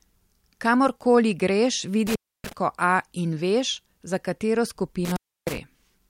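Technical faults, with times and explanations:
2.07–2.53 s and 5.05–5.58 s: intermittent contact. A loose connection in the signal chain briefly breaks, so the speech drops out for about 0.29 s in the first event and about 0.30 s in the second, just after "in veš za katero". Scraping contacts make crackle as each gap opens and closes, and only faint hiss passes while the line is open. The waveform collapses to near-flat with sharp spikes at each edge. On a spectrogram, broadband vertical streaks bracket a low, noise-only gap.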